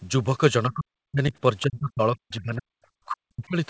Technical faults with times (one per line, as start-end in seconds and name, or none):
0.69-1.33 speech suppressed in double talk
1.66-2.73 speech suppressed in double talk
3.06-3.57 speech suppressed in double talk